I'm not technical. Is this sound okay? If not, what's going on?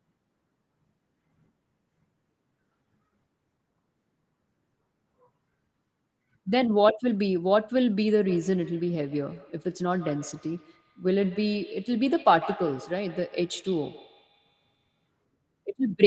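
No. From 8.25 to 15.08 s there's a feedback echo between two devices: another device in the room replays the call through its speaker, and this microphone picks it up again. The speech comes back about every 150 ms, fainter and thinner, as a quick ringing repeat.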